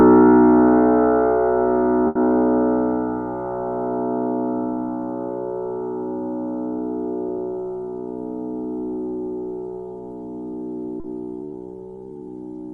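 At 2.07 s a burst of packet loss begins and lasts until about 2.18 s. Roughly 80 ms of audio never arrived, and the receiver filled that hole by stretching the last sound it had, lowering its level as the gap went on. When playback resumes, it jumps ahead past the lost stretch. That held, dimming continuation followed by an abrupt skip is what sets it apart from a shorter concealment.

Near 11.00 s, running to about 11.07 s, there is a short concealed packet loss. Here only about 40 ms failed to reach the decoder in time. The receiver continued the preceding sound just long enough to bridge the hole, then blended back into the real audio. The result is a brief smear or wobble rather than a held, fading tail.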